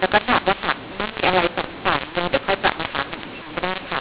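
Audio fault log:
Throughout: mu-law and A-law mixed up. The speech was coded with A-law G.711 and then read back as mu-law. The two laws assign different levels to the same 8-bit codes, so every sample lands at the wrong amplitude. Some come out too loud, others too soft. The quietest samples are lifted well above silence. The speech sounds harsh and gritty, and the pauses fill with hiss. The telephone band still stops below 4 kHz.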